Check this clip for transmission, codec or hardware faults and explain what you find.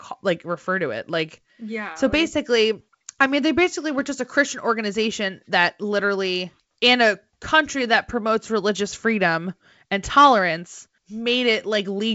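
I find no transmission, codec or hardware faults in the clip.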